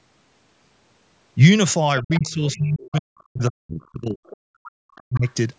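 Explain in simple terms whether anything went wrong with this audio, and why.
Two things went wrong in this recording, and both point to a call on a device playing the other person through a loudspeaker.

First, the other side's voice leaking through. A second, fainter voice can be heard underneath, at 1.98 to 2.55 s (the clearest stretch), then more faintly at 2.86 to 3.23 s, 4.27 to 4.37 s and 4.96 to 5.33 s. The likely cause is an echo canceller that didn't fully remove the loudspeaker sound from the microphone. What marks this fault is an extra voice added to the sound, not the main talker changing.

Second, speech suppressed in double talk. From 2.02 to 5.26 s, while both people talk at once, the main talker's voice keeps dipping, sometimes nearly vanishing, for about three seconds in total. Here the talker's own voice is being turned down, likely because the echo canceller couldn't tell that voice from the echo and muted both. 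That loss of the main voice is what sets it apart from the leak, where something extra is heard instead.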